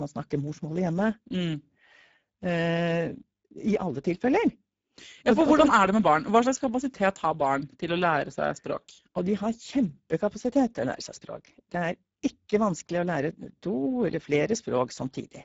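From start to finish the speech sounds hoarse and grainy, with nothing above 7.7 kHz. That is Speex codec damage: at a low setting, consistent with roughly 10 kbps, this CELP coder has too few bits to model the excitation, so noise replaces the natural voicing.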